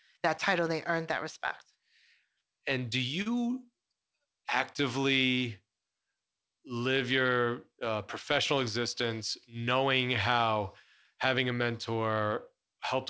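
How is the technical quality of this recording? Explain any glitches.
One glitch stands out in this speech recording, whose call-path sound stops at 8 kHz, consistent with the G.722 codec: a short stall from a late packet. At 3.22 to 3.28 s the jitter buffer emptied, so the last sound is held for 39 ms with a slight buzz or dip. Unlike a dropout, nothing is skipped.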